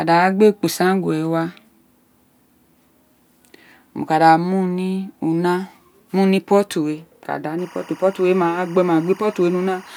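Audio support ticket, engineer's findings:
Timecode bleed from 7.59 s to the end of the speech. Steady chirpy warble sitting roughly 25 dB under the voice, flipping between pitches near 1 and 2 kHz. Probable source is an LTC track or cable coupling into the audio path. The square-wave code switching frequency per bit gives that warble, and the cadence fits 24 fps code. Worth checking routing and cable runs.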